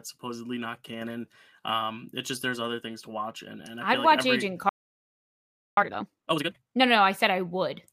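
A speech recording in which the sound cuts out abruptly at 4.69 s and stays silent until 5.77 s, a gap of about 1.1 s, before carrying on; this is a playback stall, likely the player running short of data or its output thread being held up. From 5.77 to 6.83 s the speech rushes along at twice its normal rate without any rise in pitch, which is time-compressed catch-up: the player drops short slices and cross-fades the joins to work off the backlog left by the stall.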